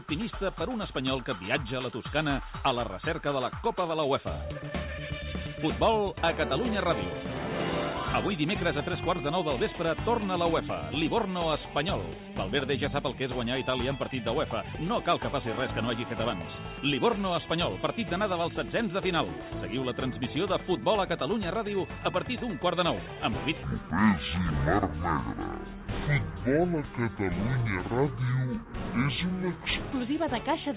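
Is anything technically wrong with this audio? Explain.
Yes. A wrong sample rate fault runs from 23.63 to 29.92 s. Across that stretch the samples are played back at half the rate they were captured at, with no conversion between the two, which fits audio recorded at 16 kHz and played at 8 kHz. Speed and pitch therefore drop together by the same ratio: the sound moves at 0.5 times its proper speed and sits a full 12 semitones lower, an octave down, so it comes across as low, slow and dragged out.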